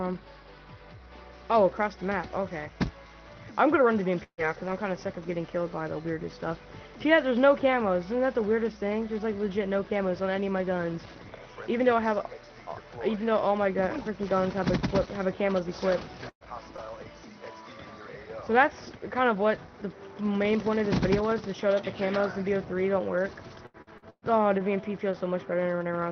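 At 4.23 to 4.41 s a burst of packet loss occurs. Several consecutive packets never arrive in time, so the receiver extends the last sound for about 142 ms, fading it until the final 70 ms or so are silent. About 120 ms of audio is skipped, and playback resumes further along. The listener hears a brief held sound dying into a hole, followed by a jump forward. A timing shift of around 22 ms accompanies the recovery.

Overlapping that recovery, at 4.38 to 4.42 s and again at 4.66 to 4.70 s, single lost packets are rebuilt from error correction. The following packet carried a coarse backup copy of each missing 40 ms, so the decoder plays that copy instead of leaving a gap. These short stretches sound grainier and noisier than their surroundings, with no dropout.

At 16.29 to 16.44 s a second burst of packet loss hits. The decoder conceals about 113 ms by continuing and fading the last sound, the last 80 ms or so going silent. 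About 120 ms is lost, and the sound picks up again past the missing part.

Two more packets are rebuilt from error correction at 16.78 to 16.82 s and 16.86 to 16.90 s, 40 ms each. Each brings the same momentary roughness and hiss without a gap.

From 23.66 to 25.15 s, repeated packet loss gives a robotic sound. Packets go missing four separate times in quick succession, with the longest hole about 119 ms. Concealment fills about 288 ms in total, roughly a fifth of the stretch, and about 280 ms of audio is skipped. A small part is patched from error-correction copies. Because each patch is followed soon after by another, the sound turns choppy, with pieces dropping out.

All of this rides on a call path whose 6 kHz high-frequency cut-off and coding grain point to Opus at a low bitrate, around 20 kbps.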